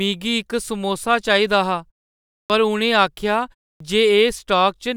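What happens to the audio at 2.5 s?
Right around 2.46 to 2.50 s you get a clipped start after a pause: after about 0.63 s of silence the output device has dozed off and needs a moment to wake, so roughly 38 ms of the speech onset is swallowed and the word snaps in abruptly.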